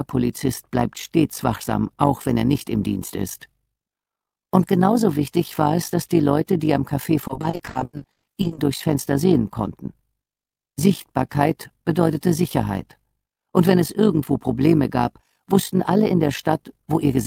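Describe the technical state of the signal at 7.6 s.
At 7.6 s the sound is choppy, with pieces dropping out. This is repeated packet loss (robotic sound), running from about 7.27 to 8.59 s. Packets kept going missing or arriving late, and each hole was patched by extending the last good sound. About half of that 1.3-second span is patched, roughly 660 ms in total, and the longest single hole is 120 ms.

Over this, and through the whole clip, runs a fast, rough flutter, a buzzy tremolo at around 50 Hz. That is overlap-add ripple. The audio was processed in windowed frames and rejoined with overlaps that don't sum to a steady gain. The level therefore swells and dips by about 11 dB once per frame, which points to a frame rate of roughly 50 per second.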